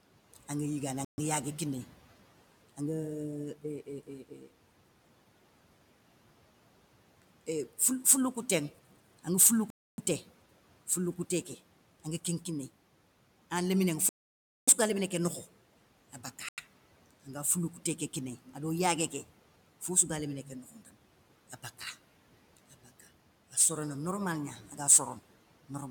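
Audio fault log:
1.05–16.60 s, Bluetooth stall: speech drops to silence at 1.05, 9.70, 14.09 (before "ga lémné ké nokho") and 16.49 s for 92–584 ms, then resumes, likely from headphone buffer underrun while interfered packets were resent.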